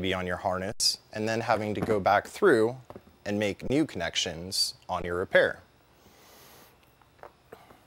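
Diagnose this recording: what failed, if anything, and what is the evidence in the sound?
Three underruns with held sample, a driver or buffer failure: at 0.72–0.80 s, 3.68–3.70 s and 5.02–5.04 s the waveform goes flat at a held level, with roughly 70, 30 and 20 ms of audio lost.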